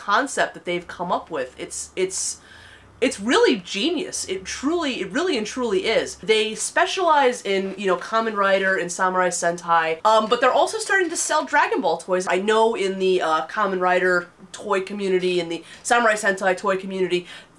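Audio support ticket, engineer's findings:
No faults found in this audio; nothing to report for the ticket.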